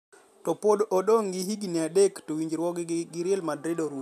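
Nothing in this recording trips the ear as a technical fault; the speech runs along without anything breaking in to interrupt it.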